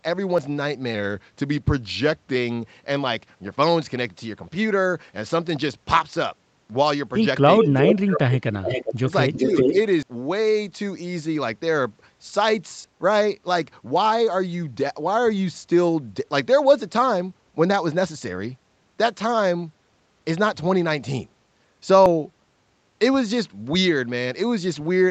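At 0.38 s there's a jump in the speech, roughly 40 ms gone with no gap. That's likely a dropped buffer (overrun), where samples got overwritten before being read. From 7.58 to 9.74 s an echo leak shows up in three patches (7.58 to 7.96, 8.66 to 8.99 and 9.33 to 9.74 s). A copy of the speech comes back about 400 ms late at nearly full level, likely from a loudspeaker echo the canceller missed. Overlapping that, the speech is suppressed in double talk at 7.60, 7.99 to 8.68, 9.00 to 9.12 and 9.46 to 9.56 s. It dips slightly in places and cuts out deeply, by about 35 dB, around 8.0 to 8.7 s, likely from the canceller ducking everything while both sides overlap. More likely overruns follow as skips at 10.03 s (a big one, about 150 ms lost), 12.84 s (about 40 ms) and 22.06 s (about 100 ms).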